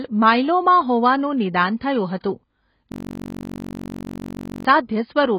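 Throughout the speech, the audio is dull, with nothing above about 5.1 kHz and a warbling, smeared texture on sustained sounds and sibilants. This is likely AAC compression at a low bitrate near 16 kbps. Unlike a simple low-pass filter, the codec leaves gaps and fizz within the remaining band.

From 2.21 to 2.24 s, a 31 ms wash of hiss comes just before a sharp onset. This is pre-echo: the transform block spreads its quantisation noise back over the quiet moment before the attack. It differs from a click or dropout because the noise arrives before the sound and fades into it.

From 2.92 to 4.65 s, a system hang loop replays one 21.33 ms slice of audio 81 times. That matches a 1,024-sample buffer cycling while the system froze. It sounds like a steady buzz at about 47 Hz. A stutter or repeated-packet fault would sound choppier, but here the loop repeats exactly and never changes.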